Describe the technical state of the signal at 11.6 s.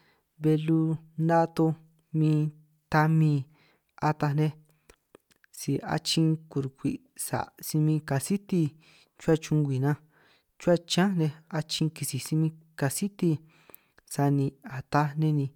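At 11.6 s the speech signal is intact, with no audible fault at that moment.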